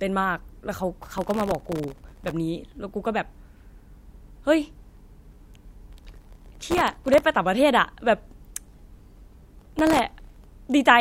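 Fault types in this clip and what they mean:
processor overload crackle: The processor missed run after run of very short buffers, under a millisecond each, and stale audio filled each gap, so gritty crackle tears through the speech three times.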